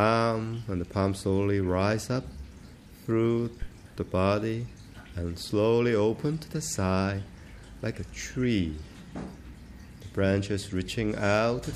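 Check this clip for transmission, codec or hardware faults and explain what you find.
One hardware fault stands out: a single phantom power thump between 3.62 and 3.70 s. It is a deep, low thud that peaks at about -21 dBFS and dies away within 16 ms. Its cause is a supply such as phantom power being switched on a live input. That sudden DC step travels through the coupling capacitors, and they pass it on as a brief, bass-heavy pulse that quickly settles.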